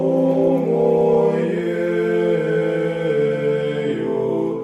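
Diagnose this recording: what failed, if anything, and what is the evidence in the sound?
Nothing in this recording points to a failure at any stage of the signal chain. There is no event in the sound that calls for a diagnosis.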